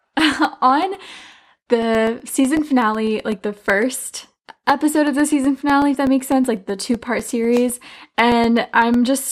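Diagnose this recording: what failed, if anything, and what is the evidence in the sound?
Driver or buffer stage. Periodic USB or driver dropouts run from 0.07 to 9.19 s. Roughly a millisecond of audio drops to silence every 0.125 s, about seventy losses, heard as regular ticks while there is signal.

Reception and codec stage. DAB burbling appears at 2.59 s, across five frames. Weak reception let bit errors past error correction, putting short blips of noise into MP2 sub-bands.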